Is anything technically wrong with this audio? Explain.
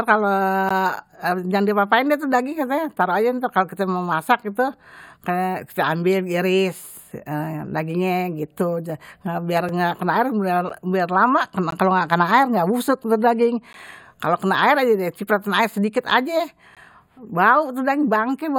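Yes. There are gaps between stream segments. The timestamps of consecutive segments, which fall at roughly one-second intervals, don't quite meet, so the player pads each shortfall with silence. This speech is cut by brief, hard-edged dropouts at 0.69, 9.69, 10.69, 11.71, 13.73 and 16.75 s. Each lasts between about 4 and 17 ms. Their spacing lines up with one-second segment boundaries. Nothing is missing from the speech itself; the silence is inserted time, heard as short ticks of dead air.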